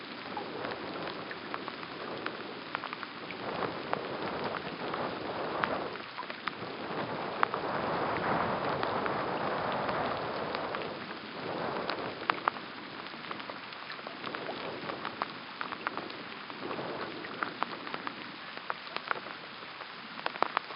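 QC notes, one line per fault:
Nothing stood out on listening to this sound that would call for a QC note.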